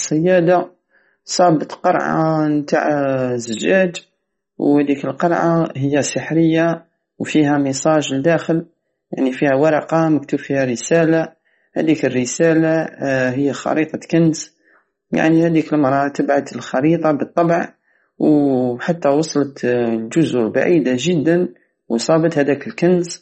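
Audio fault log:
throughout: MP3 compression, likely the cause of the watery, swirling texture that runs through the speech, with nothing above 8.3 kHz. The damage is plainly audible, which fits a low bitrate around 32 kbps. Short of bits, the encoder drops weaker frequency lines that flicker on and off between frames and cuts the treble at a fixed point. A plain low-pass filter would remove the top without the swirl.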